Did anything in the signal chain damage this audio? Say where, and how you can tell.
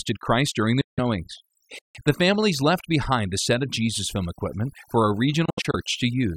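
Yes. Throughout the speech the background sits at near-silence with twinkling specks. That is overdone noise removal at the processing stage: a noise reducer set too hard pushed whole frequency bands down wherever they approached its noise estimate, taking quiet voice detail along with the noise.

Two holes mark a Bluetooth dropout on the wireless link. The first comes at 0.81 to 1.00 s, right after "during the", and lasts about 160 ms. The second follows "film equipment for a" at 5.45 to 5.75 s, as broken gaps spread over about 280 ms with no single gap longer than about 70 ms. Each time the speech resumes further on, as though it had kept playing. That points to packets that likely arrived too late for the headphones and were dropped.

At 1.79 to 1.95 s the sound simply halts mid-flow for about 160 ms and then carries on. This is a playback stall in the player's buffer stage, likely caused by the player running short of data or its audio thread being briefly blocked before output could restart.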